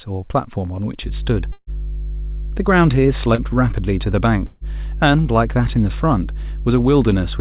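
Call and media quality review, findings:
Mains hum, 1.01 s to end. Steady 50 Hz tone with low harmonics, strong, only a few dB under the signal. Probable ground loop or transformer coupling. Constant pitch and level, unlike codec noise.

Burst of packet loss, 1.52–1.70 s and 4.46–4.64 s. Receiver concealment stretches the last sound into a fading buzz or hiss for about 150 ms. The first event ends in about 40 ms of silence. Audio resumes further on, with that stretch missing.

Short concealed packet loss, 3.35–3.41 s. Brief smear of about 30 ms where the receiver fills a missing fragment by extending the preceding sound. Much shorter than the bursts, with no audible hold or gap. Through the G.711 A-law path, band-limited to 4 kHz.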